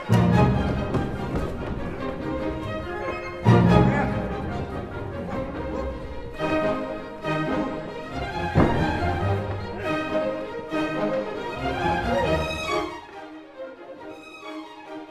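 No technical faults can be heard anywhere in the recording. The smooth level changes behave as a fader should, with each gain move gliding up or down gradually rather than jumping.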